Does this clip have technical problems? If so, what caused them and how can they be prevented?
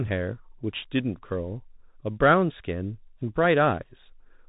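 Yes, the whole clip has been squeezed through a Bluetooth CVSD headset codec, and it's plainly audible. Everything above 4 kHz is gone, the s sounds come out scratchy, and a grainy hiss sits under the speech. That's the up-or-down, one-bit-per-sample coding, which fits a 64 kbps CVSD link, failing to keep pace with fast, loud high content. To avoid it, record on a wired mic or get the headset onto a wideband mode such as mSBC, or better, before capturing.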